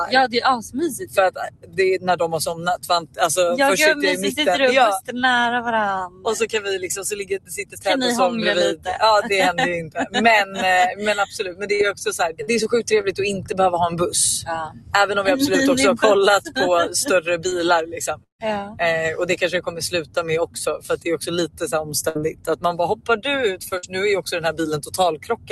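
From start to finish a noise suppressor tuned for speech stays engaged on this non-speech sound, and its gain rides up and down by roughly 10 dB. Steady, sustained material gets treated as background noise and pulled down while sharp onsets pass. The result is a pumping, fluttering level that thins held tones and tails. A codec simply coding the sound would not do this. The call path's top end stops near 12 kHz.

The suppressor cuts the sound outright in several stretches, with long, fading parts sinking hardest: 0.35 to 3.19 s (dropping by about 17 dB), 6.07 to 6.26 s (about 14 dB), 7.21 to 8.87 s (about 17 dB), 9.83 to 14.94 s (about 16 dB), and 17.86 s to the end (about 17 dB). Decays are chopped short rather than broken up. Unlike packet loss, nothing is missing or repeated. The level simply collapses.

Repeated packet loss hits 11.53 to 13.08 s, with five gaps, the longest 43 ms. It hits again at 22.09 to 23.85 s, with three gaps, the longest 63 ms. 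Each hole is bridged by stretching the last sound forward before the next hole arrives. That gives a choppy texture with small pieces gone. This differs from the suppressor's smooth level dips because the sound itself is falsified and rhythmically broken.

A short concealed packet loss at 17.49 to 17.53 s fills about 20 ms with an extension of the preceding sound. It is heard as a single brief smear or wobble, not the recurring chatter of the repeated loss.

At 18.23 to 18.41 s the audio drops out for about 0.16 s, likely a network dropout. A fading continuation of the last sound covers the start, then about 0.12 s of silence follows before the sound resumes with that piece absent. Its silent hole sets it apart from the brief concealed losses, which never fall fully quiet.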